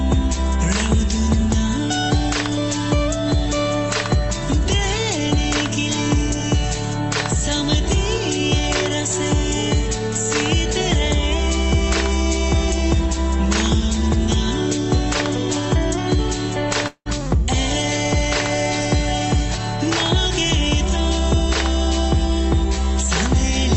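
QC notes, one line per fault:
16.87–17.09 s, long network dropout. The sound smears into a fading buzz for about 0.18 s, then falls silent for about 0.07 s. It resumes with about 0.18 s gone. Packets likely stopped arriving, so the receiver stretched the last sound to cover the gap.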